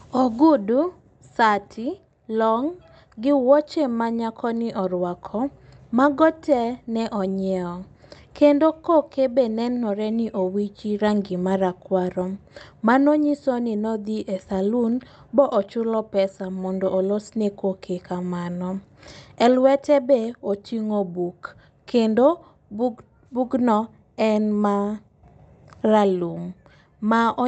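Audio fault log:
Nothing in this speech clip needs flagging; it sounds like a normal Opus call path, with the top end stopping around 8 kHz as that setup would have it.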